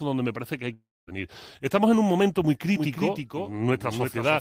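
Audio likely stopped arriving from 0.73 to 1.09 s after "me parece que hay", a long network dropout. A fading buzz gives way to silence.

At 2.76 s, after "en un momento muy", audio likely captured twice forms a doubled audio track: a copy about 5 dB quieter, roughly 0.3 s late, until the end.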